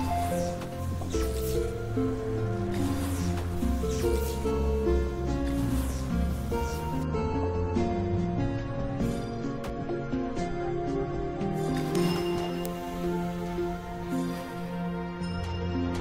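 At 11.95 s and again at 12.66 s there is a single sharp tick, each a bit error spike: a flipped bit in memory or on a digital link that threw the value of three consecutive samples by a power of two, peaking at about −12 dBFS before snapping straight back. Each tick is broadband and bears no relation to the surrounding sound. Unlike a dropout click, nothing goes missing: there is no gap, no step in level, and the audio continues exactly as before.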